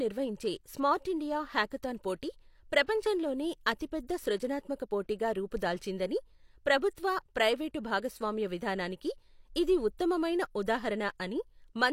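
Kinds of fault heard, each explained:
Pre-echo, 2.84 to 2.88 s: a short hiss creeps in about 40 ms ahead of a sharp speech onset. The transform codec spread quantisation noise, sized for the loud attack, across its whole block, so the noise fills the quiet gap and blurs the attack.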